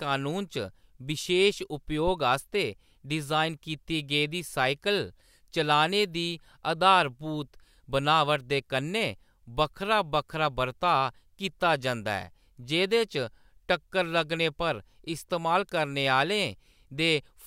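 At 2.07 s there's a phantom power thump running to 2.14 s. Switching phantom power on or off on the live input sent a voltage step through the coupling capacitors, giving a deep low thud peaking at about -22 dBFS that dies away within roughly 15 ms.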